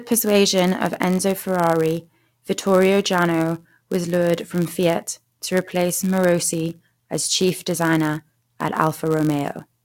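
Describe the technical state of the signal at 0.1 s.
At 0.1 s the speech carries a block size mismatch (padded), which runs through the whole clip. Each block arriving from one stage is shorter than what the next stage reads, so every block ends in a brief stretch of zeros. The result is a steady buzz near 99.6 Hz and speech running slower by a factor of 0.996 at essentially normal pitch. Irregular underrun dropouts would not buzz this evenly, and a truncating mismatch would speed the speech up instead.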